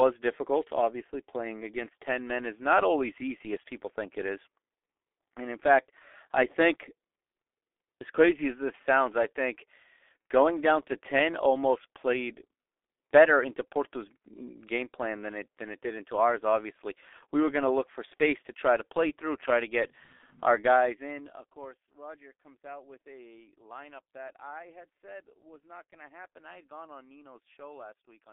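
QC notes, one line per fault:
Throughout: G.723.1 codec. The speech is muffled and hoarse, with smeared consonants and nothing above about 3.6 kHz or below 300 Hz. Its heavy damage comes from a roughly 6 kbit/s coder working in 30 ms frames whose slowly updated voice model blurs fast detail.
10.22 to 10.25 s: VoIP packet loss concealed by the speech codec. Between "this sounds I think" and "going down to", the sound is briefly stretched and fades. The decoder is rebuilding one lost 30 ms frame from the previous pitch and filter at lowered gain, so it stays dulled as later frames recover.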